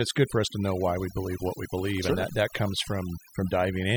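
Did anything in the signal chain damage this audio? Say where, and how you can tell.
Yes, there's overdone noise removal from start to finish, at the processing stage. The background drops and breaks up into twinkling specks. A suppressor set far too hard is muting frequency bands near its noise estimate and taking quiet speech detail with them.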